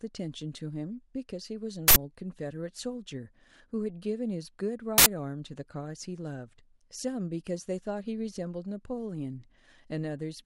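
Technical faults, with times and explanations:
1.88–1.96 s and 4.98–5.06 s, uninitialised buffer: twice, an 80 ms block of sound is replaced by a short, loud burst of digital noise. The playback buffer was sent out before any audio had been written into it, so whatever values were left in memory were played as samples. On a waveform each event is a dense slab with hard edges. On a spectrogram it is a bright broadband vertical band that cuts across the speech.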